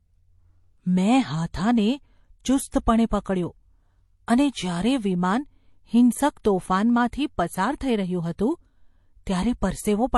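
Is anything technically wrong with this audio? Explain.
Yes. Throughout the speech, there is likely transcoding between lossy codecs. Nothing is heard above about 12.1 kHz, and the compression artefacts of one codec are layered with a second, different kind. That mix, which fits an MP3 later re-encoded to HE-AAC at low bitrates, sets it apart from a single encode.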